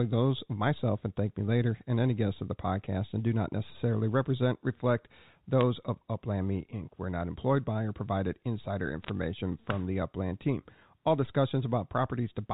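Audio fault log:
5.61 s, bit errors on a digital phone line: a few flipped bits in the mu-law samples give a brief, sharp tick where single sample values jump.
9.03 to 9.09 s, bit errors on a digital phone line: a denser cluster of corrupted samples sounds like a short crackle over the speech.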